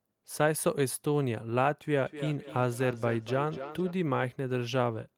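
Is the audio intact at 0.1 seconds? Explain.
Yes, the audio is intact at 0.1 s, with no dropout, click, distortion or other fault at that moment.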